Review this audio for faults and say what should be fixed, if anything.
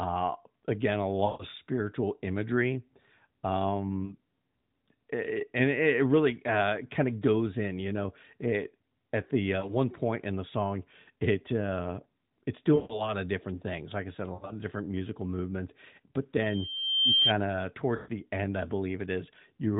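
Speech drops out six times in short warbles. At 1.26 to 1.45 s and 12.76 to 13.15 s, about 140 ms of speech is gone, and the sound smears out and sinks toward silence before recovering rough. Shorter dips occur at 4.06 to 4.13 s (40 ms), 9.6 to 9.75 s (a single 20 ms gap), 14.34 to 14.53 s (120 ms broken into pieces, the longest about 80 ms), and 17.96 to 18.1 s (120 ms). These are lost AMR speech frames: radio errors corrupted 20 ms frames of the AMR-NB stream, whose band-limited narrowband sound is audible throughout. The decoder repeated the last good pitch and vocal-tract settings at falling gain, which stretches and fades the sound until good frames return. To prevent it, improve radio link quality or add stronger channel coding and interleaving so that fewer frames fail their checksum.

From 16.39 to 17.33 s a single high tone near 3.2 kHz swells up over most of a second and peaks a few dB above the speech. 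This is loudspeaker feedback squeal: the microphone picked up its own loudspeaker, and at 3.2 kHz the loop gain passed one, so that frequency fed on itself and grew. To prevent it, lower the monitor gain, move the microphone away from the speaker, or notch out 3.2 kHz with a feedback suppressor.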